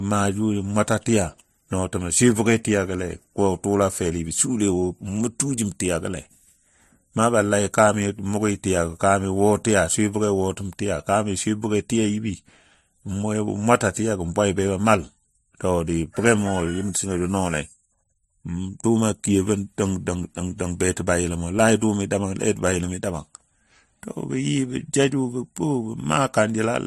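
Throughout, the speech likely underwent transcoding between lossy codecs, sounding like AAC then MP3. Nothing lies above 12.5 kHz, and both codecs' artefacts stack.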